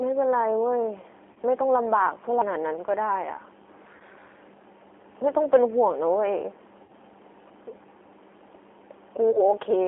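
Speech passed through the G.729 codec at 8 kbit/s, confining it to a 300 Hz to 3.4 kHz phone band and giving it a plainly rough, synthetic texture. VoIP packet loss concealed by the speech codec occurs at 1.33 to 1.38 s, 3.97 to 4.02 s, 6.84 to 6.92 s and 9.31 to 9.42 s. The decoder fills each gap by stretching its last pitch and filter into a fading buzzy tone or coloured noise, and the sound stays weakened briefly afterwards. The gap near 6.9 s spans 60 ms, which fits two consecutive lost packets, while the others span 30 ms each.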